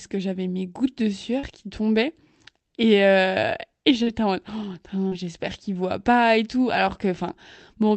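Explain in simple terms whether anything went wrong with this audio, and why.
Short concealed packet loss occurs three times: at 1.39 to 1.46 s, between "j'avais mes gouttes de" and "qui tombaient"; at 4.03 to 4.09 s, between "euh et" and "en mode"; and at 5.08 to 5.14 s, just before "j'espère qu'ils voient pas". Each time, about 40 ms of the call arrived too late, so the receiver filled the gap by stretching the preceding sound and then blending back in. This causes a brief smear or wobble.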